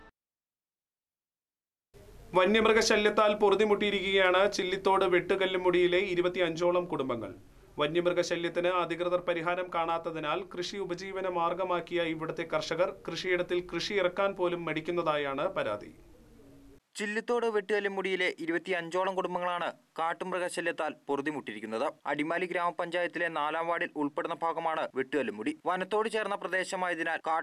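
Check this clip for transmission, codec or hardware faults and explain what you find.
Nothing here stands out as a fault; the audio comes across steady and intact all the way through, with nothing to flag.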